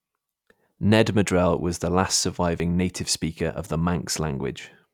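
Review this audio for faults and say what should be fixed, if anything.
No technical faults can be heard in this speech recording. Nothing here needs to be fixed.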